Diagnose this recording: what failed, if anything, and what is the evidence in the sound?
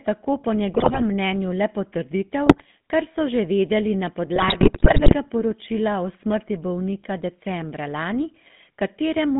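The codec stage failed: the whole recording carries the buzzy, gravelly roughness of the GSM full-rate codec. The decoder rebuilds the speech from a vocal-tract filter driven by a sparse, regularly spaced pulse excitation, and the coarse excitation produces the grating texture, which fits 13 kbps full-rate coding. On a spectrogram, energy is confined to 150 Hz to 3.7 kHz, with blank regions above and below and smeared, grainy harmonics inside the band.

In the network (radio link) stage, GSM bit errors break up the sound at 0.74 to 1.03 s, 2.46 to 2.65 s and 4.36 to 5.15 s. There it turns into squawks, pops and gargling, with the longest burst at 4.4 to 5.1 s. Corrupted filter, pitch and gain parameters reached the decoder, so individual frames were rebuilt with a warped spectrum or an inflated level. On the waveform these show as frame-sized amplitude jumps, and the spectrogram shows blocky vertical bands of misplaced energy.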